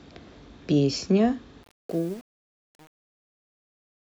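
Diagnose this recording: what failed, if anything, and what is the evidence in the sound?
Truncation distortion on a fade, 1.63 to 4.08 s: during the speech's fade-out from about 1.6 s, an undithered gain stage steps the waveform coarsely, consistent with 7-bit resolution, so it turns gritty from 1.69 s.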